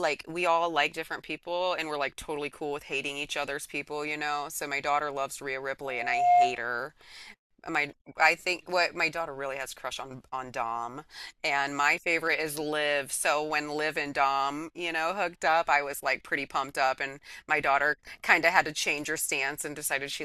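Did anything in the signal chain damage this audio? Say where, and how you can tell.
Yes. A loudspeaker feedback squeal runs from 5.82 to 6.66 s. It is a single steady tone at 712 Hz that swells over about half a second until it sits roughly 10 dB above the speech. The damage comes from the acoustic path at the analogue stage. The microphone is picking up the loudspeaker it drives, and at 712 Hz the loop gain passed one. That frequency then reinforced itself on every trip around the loop until it was cut off.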